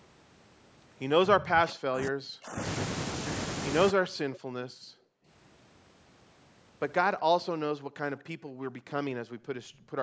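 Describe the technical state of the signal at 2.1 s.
At 2.1 s the speech sits inside a suppressed stretch from 1.27 to 2.6 s, dropping by up to roughly 40 dB. This is likely speech suppressed in double talk, where the echo canceller mistook the talker for far-end echo and attenuated both.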